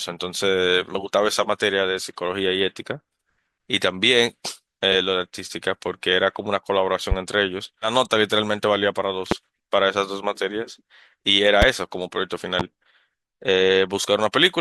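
At 7.12 to 7.14 s there's a loud pop, a sharp thump about 15 dB over the speech, likely a voltage spike from a plug, switch or static. At 7.81 to 7.88 s compressed frames are skipped: roughly 150 ms of audio vanishes as the sound jumps ahead, which fits about fifteen 10 ms frames dropped. The same kind of pop returns at 9.31 to 9.34 s (about 20 dB up), 11.62 to 11.65 s and 12.60 to 12.62 s, with the speech carrying on underneath each one.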